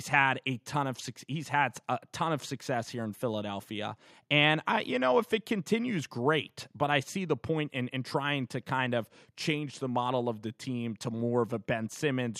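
No technical faults can be heard anywhere in the recording.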